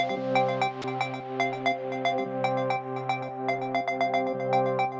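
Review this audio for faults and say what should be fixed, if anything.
At about 0.82 s there's a brief sound dropped by the voice detector: about 20 ms of audio gives way to steady comfort noise, likely because the sender's detector read a quiet stretch as background and briefly stopped sending. The call path's 8 kHz ceiling, which fits G.722, is present throughout. To prevent the dropout, lower the detector's threshold or add a longer hangover time before it stops transmitting.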